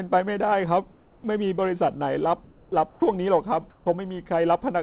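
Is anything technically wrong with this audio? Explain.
Yes, there are two related faults in this speech.

Comfort noise in place of the background occurs at 0.92–1.24 s, 2.44–2.72 s, 2.90–3.02 s and 3.70–3.86 s. The sender likely stopped transmitting during pauses, and the receiver synthesised noise instead. The real background becomes a smooth, featureless hiss, about 1 to 5 dB quieter. On a spectrogram it shows as an even, textureless band. On a waveform it is a flat, uniform floor.

Onset clipping by the voice detector occurs at 1.22 s and at 2.69–2.72 s, where about 20 ms and 30 ms of the start are missing. The detector was likely slow to register that sound had resumed. Speech bursts in abruptly. The waveform jumps straight from the flat noise floor into speech, with no gradual rise. The spectrogram shows a hard vertical edge.

Across the whole clip, the G.711 call path leaves nothing above 4 kHz, which fits an 8 kHz sample rate.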